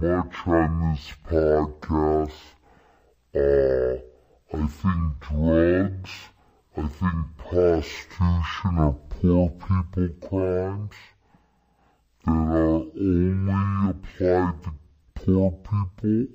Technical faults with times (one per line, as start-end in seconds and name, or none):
0.00-16.35 stereo read as mono